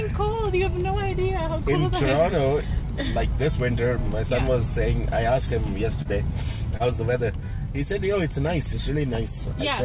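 Audio carried over a call path, band-limited to nothing above 4 kHz in the way a 64 kbps G.711 A-law codec is, shows short concealed packet loss twice, at 6.02 s and 6.77 s. Each time about 30 ms of audio arrived too late for the decoder, and the receiver extended the preceding sound to cover the gap before blending back into the real signal. The result is a brief smear at each point, with the second stretched by a few extra milliseconds.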